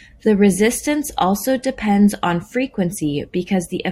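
Speech, with no technical fault audible anywhere in the recording.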